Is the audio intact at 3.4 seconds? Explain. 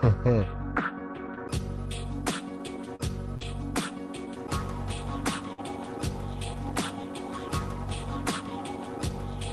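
No. At 3.4 seconds the audio passes through two overlapping faults.

The first is a short concealed packet loss from 3.37 to 3.44 s. About 40 ms of the stream never arrived in time. The receiver covered roughly 35 ms of that hole by stretching out the sound just before it, then faded back into the real signal. The result is a brief smear or wobble rather than a clean gap.

Inside that span, from 3.41 to 3.43 s, there is a lost packet rebuilt from error correction. The following packet carried a low-bitrate spare copy of this 20 ms frame, and the Opus decoder played that copy instead of silence. That frame sounds rougher and noisier than the material around it.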